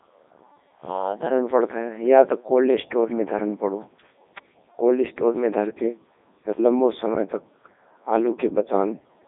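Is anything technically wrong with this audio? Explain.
Yes. The whole recording has gone through a Codec 2 vocoder, which fits its 3.2 kbit/s mode. The codec keeps only pitch, voicing, energy and a spectral envelope, then rebuilds the speech from sine waves, so the original waveform is lost. The result sounds robotic, buzzy and heavily damaged. The band sits between 200 Hz and 3.7 kHz. A spectrogram shows clean synthetic harmonics with nothing above 3.8 kHz, and the waveform no longer resembles natural speech.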